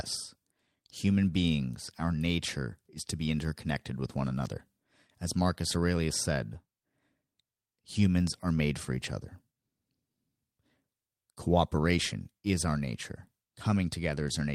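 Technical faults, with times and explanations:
No technical faults heard.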